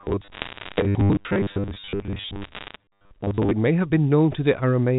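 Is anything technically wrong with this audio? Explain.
Yes. There are two faults.

From 0.01 to 3.51 s the speech has a robotic sound from repeated short buffers. It is a rigid, metallic buzz at 100 Hz that loosely tracks the speech. The likely cause is audio arriving too slowly, so the last 10 ms keeps replaying while most of the real signal is skipped.

Bit errors on a digital phone line cause crackle from 0.32 to 0.80 s and again from 2.42 to 2.76 s. On this G.711 A-law line, a small fraction of bits flipped, below one percent. Each error corrupts a single sample, giving sharp ticks over the speech.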